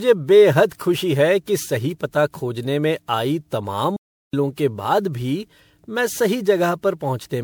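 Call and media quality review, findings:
Generation loss, whole clip: swirly, hollow, smeared speech, soft consonant attacks. Spectrogram shows stacked holes and smearing, nothing above 20.8 kHz. Fits MP3 at 128 kbit/s, likely re-encoded around ten times on shifting frame grids.

Playback stall, 3.96–4.34 s, right after "में आई तमाम": speech cuts mid-flow for about 0.37 s, then resumes. Waveform shows a flat silent gap. Player data underrun or blocked output thread likely.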